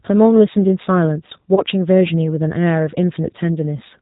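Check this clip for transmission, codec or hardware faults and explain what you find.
Two faults are audible: a low-bitrate speech codec throughout, and one concealed packet loss.

The G.729 codec runs for the whole clip, and its damage is plainly audible. At 8 kbit/s, each 10 ms frame is rebuilt from a vocal tract filter, a pitch predictor and a few pulses. Nothing above 4 kHz survives. The speech sounds muffled, rough and slightly synthetic.

VoIP packet loss concealed by the speech codec occurs from 1.55 to 1.62 s. About 20 ms of audio went missing, which fits two lost 10 ms frames. The decoder filled the gap by repeating its last pitch and filter at falling gain. The sound smears into a brief buzzy tone or coloured noise that fades. It stays weak or distorted for a moment as the decoder recovers.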